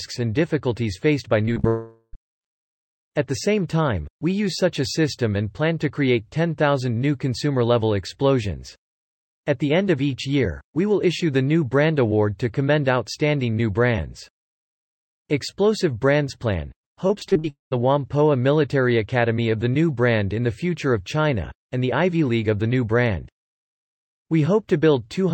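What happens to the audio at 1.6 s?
Short concealed packet loss hits twice, at 1.53 to 1.58 s and 1.60 to 1.65 s. Each time a few hundredths of a second of audio failed to arrive, and the receiver patched the gap by extending the preceding sound before blending back, which is heard as a brief smear or wobble. From 1.67 to 2.15 s the sound is replaced by a continuation of itself that buzzes or hisses and fades into about 40 ms of silence, after which the audio resumes with almost half a second missing. That is most likely a long network dropout.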